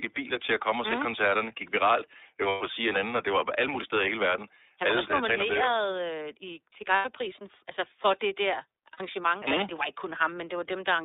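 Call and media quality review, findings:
iLBC codec, whole clip: narrowband speech, nothing below about 300 Hz or above 3.7 kHz, slightly rough, synthetic timbre, plainly audible. Spectrogram: flat empty band above 3.7 kHz, smeared harmonics. Each frame's excitation coded independently, and the coarseness fits the 13.33 kbps, 30 ms frame mode.

Lost iLBC frames at 2.48–2.62 s (120 ms), 6.95–7.06 s after "i til" (90 ms), and 8.93–9.01 s after "altså for det der" (60 ms): held, buzzy vowel-like tone. The durations fit four, three and two lost 30 ms frames. Decoder repeats the last pitch cycle plus noise, fading over the longer gaps. On the waveform: near-repeating periods with decaying amplitude. On the spectrogram: frozen horizontal harmonic lines. Clean recovery on the next frame because frames stand alone.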